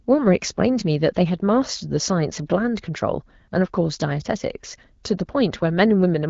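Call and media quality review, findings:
No faults found: the speech runs over an AMR wideband (HD Voice) path whose 12.65 kbit/s coding leaves only light, expected codec colouring on a band that tops out around 7 kHz.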